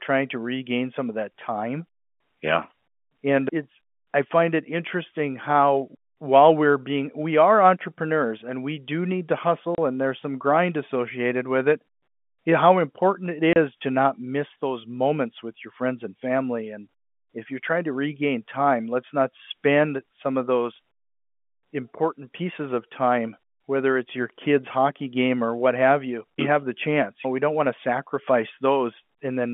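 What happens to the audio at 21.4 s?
Nothing goes wrong at 21.4 s: the speech carries on intact, with only the narrow band of G.711 telephone coding, roughly 200 Hz to 3.4 kHz, that runs through the whole clip.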